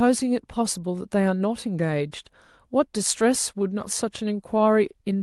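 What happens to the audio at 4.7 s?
Around 4.7 s the sound falls inside a long run of repeated timing corrections, lasting from about 0.24 s to 5.17 s. The sender's clock runs roughly 2% slow against the receiver's, so the stream plays at about 98% speed and the jitter buffer keeps threatening to run dry. To stay in step, the receiver stretches the audio by repeating short pieces, adding around a tenth of a second in total across the stretch. Each of these corrections is small.

This is clock drift between sender and receiver, and it differs from a burst of packet loss. Loss gives isolated dropouts or smeared concealment. Drift gives small corrections that recur all through the clip, always in the same direction, at uneven intervals. The Opus call path, with its top end near 12 kHz, is heard underneath this as ordinary call audio.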